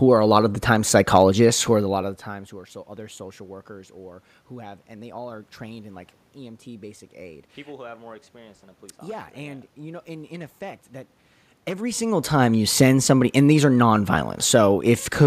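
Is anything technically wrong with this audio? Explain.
No, the speech signal arrives intact, and the room noise along with the level shifts near 2 seconds and again around 11 or 12 seconds, where the talker moves relative to the microphone, belong to the recording itself rather than to any fault in the system.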